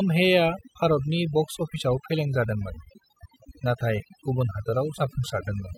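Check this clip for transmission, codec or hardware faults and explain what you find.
Overdone noise removal runs through the whole speech clip. A denoiser pushed too hard keeps clamping individual frequency bands whenever they sit near its noise estimate, so quieter bits of the voice get cut too. You hear near-silent gaps with twinkly specks.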